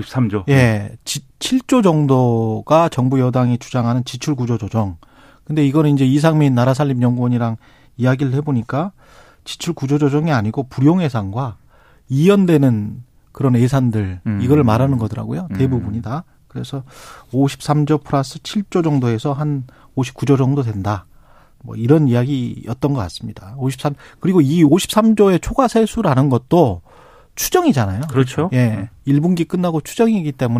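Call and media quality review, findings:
Nothing stood out on listening to the speech recording, so there are no findings to log for this ticket.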